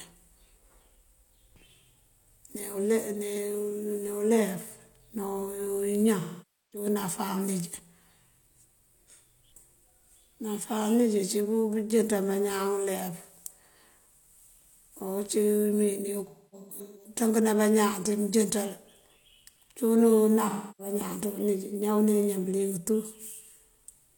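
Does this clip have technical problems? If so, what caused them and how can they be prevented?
Yes. At 6.19–6.86 s, 16.26–17.10 s and 20.49–20.94 s the speech turns smeared, noisy and phasey. The middle patch breaks into scattered gaps, the longest about 0.3 s. This is AAC frame loss with concealment: the decoder filled about 0.51 s, 0.47 s and 0.30 s of missing audio by reusing the last good spectrum. Forward error correction or retransmission on the transport would prevent it.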